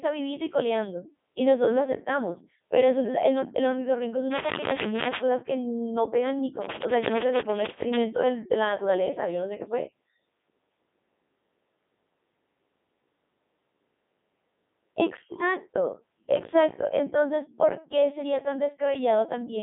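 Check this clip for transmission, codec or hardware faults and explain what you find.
One codec fault runs through the whole clip. Codec 2 vocoder, throughout: the voice is synthesised from sine waves using only pitch, voicing and spectral envelope, so speech sounds heavily robotic and buzzy, confined to 200 Hz–3.6 kHz, which fits the 3.2 kbit/s mode.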